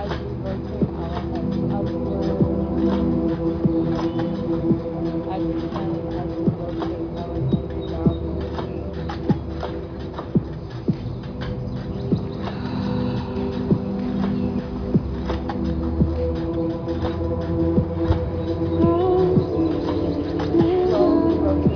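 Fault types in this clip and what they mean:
Aliasing, throughout: energy above 5.5 kHz folds back as unrelated, metallic-sounding tones about 25 dB below the sound, because the rate was lowered without an anti-alias filter. The spectrum runs hard up to that edge, which fits resampling to 11 kHz.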